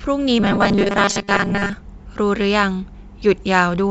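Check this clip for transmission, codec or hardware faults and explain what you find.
One transmission fault is audible. From 0.40 to 1.73 s the speech takes on robotic sound from repeated short buffers: a rigid, metallic buzz near 200 Hz. The likely cause is a receiver starved of packets looping about 5 ms of audio, so most of the real signal in that stretch is skipped. The call path's G.722 codec also limits the band, with nothing above 8 kHz.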